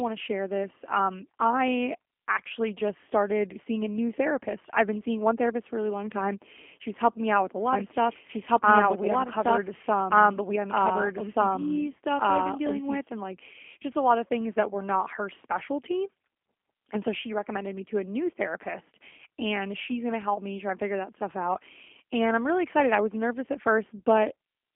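The whole clip is G.729 codec speech, held to a 250 Hz to 3.4 kHz line band. The rebuilt speech sounds rough and synthetic, as an 8 kbit/s codec would.

From 7.73 to 12.99 s, after "me out with a" and until "and like just a", a doubled audio track appears. A second copy, about as loud, trails by roughly one and a half seconds. It starts and stops abruptly, likely from a second, slower capture path.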